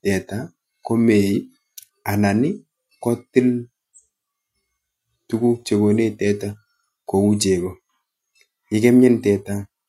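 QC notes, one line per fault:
No faults heard in this speech recording.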